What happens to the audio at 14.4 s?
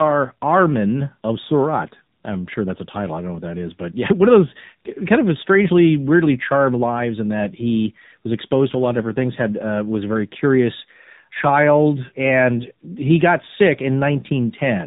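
At 14.4 s the speech carries tandem speech coding, present across the whole clip. It was decoded and re-encoded at each link, with CVSD then AMR-NB at about 7.4 kbit/s compounding errors, so it sounds rough, muffled and warbly. A spectrogram shows nothing above 3.8 kHz.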